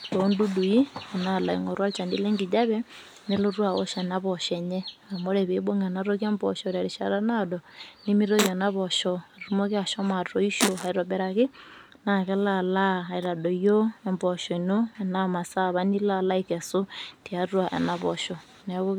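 No technical faults are audible at any point in the recording.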